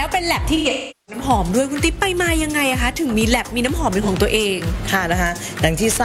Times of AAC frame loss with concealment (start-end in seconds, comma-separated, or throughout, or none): 0.56-1.23, 4.02-4.08